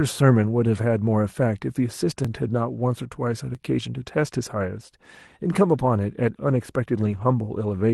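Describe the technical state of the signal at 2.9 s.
At 2.9 s the speech comes through intact, with nothing wrong beyond the ordinary character of the Opus call path it passed through.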